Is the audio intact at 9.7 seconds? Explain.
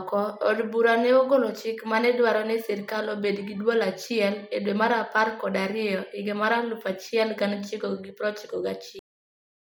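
No. At 9.7 seconds the speech has already been cut off: a cut-off end begins at 8.99 s, where the final buffers were never written, so the sound stops mid-syllable into digital silence through 9.77 s. The waveform drops abruptly to a flat line, and the spectrogram goes blank with no decay tail.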